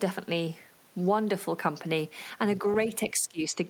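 From 3.11 to 3.61 s the speech sinks by around 15 dB, likely speech suppressed in double talk, an echo canceller ducking overlapping audio.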